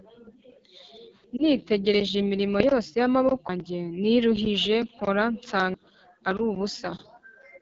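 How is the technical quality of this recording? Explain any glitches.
The recording's quality is poor: the speech is coded at a low bitrate throughout, with one brief frame dropout and two clear skips where audio is missing.

Throughout, the speech carries AMR wideband (HD Voice) codec damage at 8.85 kbit/s, the codec's second-lowest rate. The pulse-driven vocal tract model gets too few bits at this rate, so the voice sounds plainly rough and raspy, with a noise-filled top band above 6.4 kHz.

At 1.37 to 1.41 s, one AMR speech frame of 20 ms is lost. The decoder fills the gap by reusing the previous frame's pitch and vocal tract settings with reduced gain. The result is a short dip or warble before normal decoding resumes.

At 3.49 s, between "imirimo yose yamaboko" and "niruhije nkora", and again at 5.74 s, just after "niruhije nkora", audio is missing between chunks. About 300 ms vanishes each time, and the two sides are butted together, so the speech audibly jumps. 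The 2.5 s spacing likely comes from chunked recording or processing.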